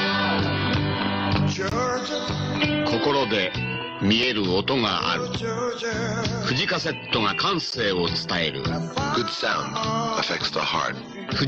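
At 1.70–1.72 s and 7.71 s, gaps between stream segments: mismatched timestamps at 6-second boundaries insert hard-edged silent holes of 18 and 14 ms.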